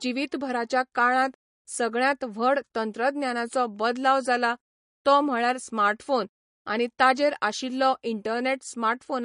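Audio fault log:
Throughout, MP3 compression: the speech has nothing above 10.6 kHz, and its upper band sounds watery and swirly, with a plainly audible chirpy, metallic edge on s sounds and softened consonant attacks. The likely cause is an MP3 encoder starved of bits, consistent with roughly 40 kbps, cutting the treble and dropping weak spectral lines that flicker between frames. On a spectrogram, a flat ceiling at 10.6 kHz sits above patchy, blotchy islands of energy.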